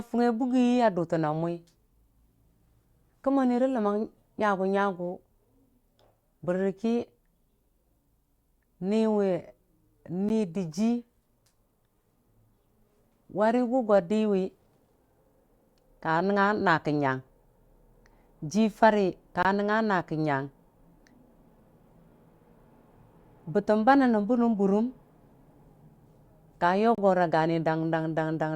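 At 10.29 s the speech drops to silence for 13 ms, then again from 19.43 to 19.45 s, just after "jirarə ka", for 22 ms, and from 26.95 to 26.98 s for 31 ms. These are likely Bluetooth stalls: delayed packets let the headphone buffer empty until resent data arrived. Each is heard as a tiny gap, and each shows as a flat line in the waveform and a clean vertical blank across all frequencies on a spectrogram.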